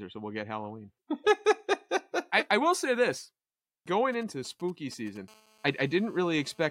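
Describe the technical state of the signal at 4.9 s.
At 4.9 s the speech carries GSM signalling bursts, running from 4.13 to 5.18 s. A nearby 2G handset exchanging control traffic emits short groups of radio pulses that the audio circuitry rectifies into a 217 Hz buzz, heard as a galloping ticking sitting roughly 25 dB under the voice. On a spectrogram this shows as clustered vertical striations with a comb of harmonics spaced 217 Hz apart; the waveform shows regular spiky pulses riding on the speech.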